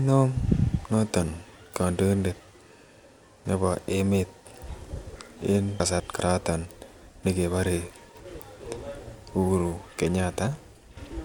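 Chunks out of order at 5.8 to 6.2 s and again at 8.2 to 8.6 s. In each span, a 200 ms block of the speech arrives one block late, so it plays after the block that should follow it. No audio is lost, but the two segments are swapped, leaving three abrupt joins where the waveform jumps. Each moment sounds briefly scrambled.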